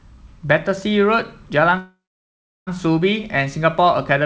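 Speech carried over a call path, with nothing above 8 kHz, which fits a wideband G.722 codec. A call audio freeze runs from 1.78 to 2.69 s. The last sound is drawn out briefly, then about 0.71 s is silent. The speech then resumes where it stopped, with nothing lost. Packets were likely held up in transit, draining the jitter buffer.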